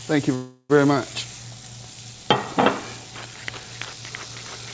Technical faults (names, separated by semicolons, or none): call audio freeze